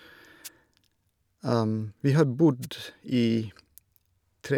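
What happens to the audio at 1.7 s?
Nothing goes wrong at 1.7 s; the speech carries on intact through that moment, with no dropout, click or distortion to be heard.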